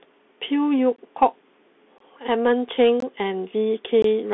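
From the start, the speech sounds thin and boxy, with scratchy s sounds, a granular hiss beneath it, and harshness on loud, bright syllables. Nothing is heard above about 3.8 kHz, and the band sits roughly between 200 Hz and 3.5 kHz. This is the Bluetooth CVSD headset codec, which fits a 64 kbps link. It encodes each sample as a single up-or-down bit with an adapting step size, and when fast, loud high content outruns that step, it smears into distortion.

Short hard-edged holes then break the sound at 0.96–0.98 s, 1.98–2.00 s, 3.00–3.02 s and 4.02–4.04 s, each 20 ms long and about one second apart. These are gaps between chunks. The audio was delivered in 1.0 s chunks, and silence was inserted at each join instead of the next chunk following straight on. Nothing is missing from the content itself, but the sound stops abruptly and resumes at each boundary.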